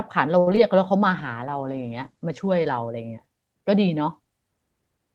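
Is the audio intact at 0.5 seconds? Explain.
No. A short stall from a late packet runs from 0.39 to 0.48 s. The jitter buffer ran dry, so the last sound was stretched for about 73 ms and then resumed where it left off. Nothing is lost, but the sound is held too long and the delay grows by 73 ms. Right after, short concealed packet loss hits at 0.51 s and again from 0.55 to 0.58 s. The gaps were filled by extending the preceding sound, which drops about 20 ms and 10 ms of real audio and leaves a brief smear or wobble.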